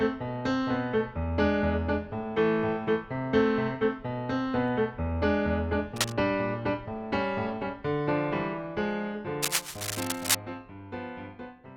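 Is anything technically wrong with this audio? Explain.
Yes. Cable scratch noise appears twice, from 5.92 to 6.15 s and from 9.42 to 10.36 s. Each time, dense, irregular scratching and rustling sits over the sound, a little below its level in the first burst and about as loud as it in the second. This is likely a worn cable, connector or control being moved, its contact resistance jumping erratically. Unlike steady hiss or isolated clicks, the noise comes in short, uneven clusters.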